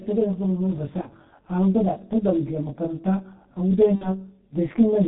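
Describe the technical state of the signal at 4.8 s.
At 4.8 s the speech sounds rough and slightly doubled. This is channel delay (comb filtering), present throughout the clip. One channel runs roughly 20 ms behind the other, and when the two are summed to mono, content common to both cancels at regularly spaced frequencies. That leaves a dense comb of fixed notches starting at around 20 Hz, which roughens the tone.

The same moment is also muffled and hoarse, with smeared consonants. This is heavy G.723.1 codec damage, again spanning the whole clip. The codec discards everything above 4 kHz, which removes the brightness and crispness of consonants. Its coarse 30 ms frames and slowly updated voice model blur rapid changes, and the degree of degradation fits a bitrate near 6.3 kbit/s.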